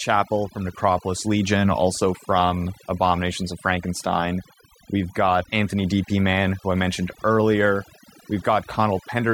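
From start to finish, overdone noise removal strips spectral bands near the noise floor, leaving near-silent gaps with twinkling artefacts.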